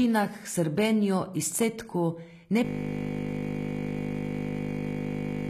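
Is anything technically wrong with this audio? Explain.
Yes, there are three kinds of fault in this speech clip.

Throughout, the encoder likely kept only the lower spectrum and synthesised the treble by spectral band replication, as HE-AAC compression does at a low bitrate, around 20 kbps. Nothing remains above 14.9 kHz, the codec damage is plainly audible, and the rebuilt treble does not match the original harmonics.

At 0.54, 1.52 and 2.50 s, spaced about 1.0 s apart, the recorder likely dropped a short piece, around 20 ms, while switching chunks, so this is audio missing between chunks. The two sides butt together without silence, heard as regular skips.

From 2.65 s to the end, the system froze while the hardware kept replaying one 20 ms buffer, a system hang loop. That fragment repeats about 145 times, producing a steady buzz at 50 Hz in place of the speech.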